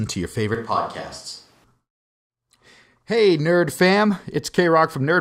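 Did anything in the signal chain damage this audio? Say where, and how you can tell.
Yes, at capture: right after "to your", 0.55 to 1.64 s turns hollow and roomy with thinner bass at an unchanged level, likely a switch to a distant microphone, not a gain drop.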